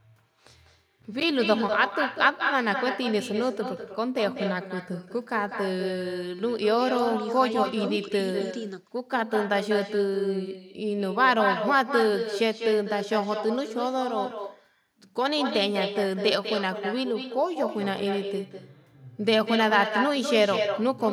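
Throughout the speech, every phrase is shadowed by a quieter and thinner copy trailing about a fifth of a second behind, roughly 6 dB down. This is echo with no canceller: the far end's loudspeaker feeds its microphone, and nothing removes the returning signal.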